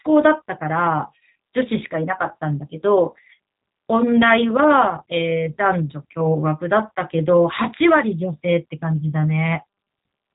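G.729 codec damage runs through the whole clip: the speech is rebuilt from a vocal tract filter, a pitch predictor and a few pulses per frame, so it sounds plainly rough and synthetic, and nothing above 3.8 kHz survives. That points to G.729A at 8 kbit/s.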